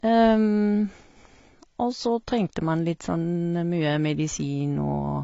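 Speech throughout carries plainly audible AAC compression damage, likely from low-bitrate AAC-LC coding around 24 kbps: dull, smeared and warbly, with nothing above 7.5 kHz. On a spectrogram the energy stops at a flat, hard ceiling at 7.5 kHz for the whole clip.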